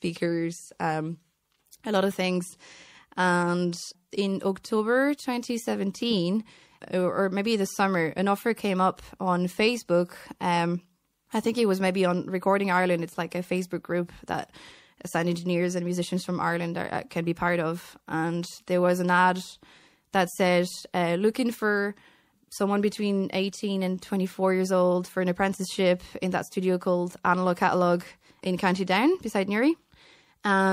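Throughout the speech, MP3 compression, likely a 64 kbps encode, makes s sounds watery and swirling, unlike a steady low-pass filter.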